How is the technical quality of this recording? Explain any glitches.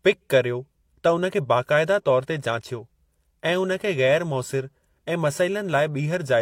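No audible glitches or faults.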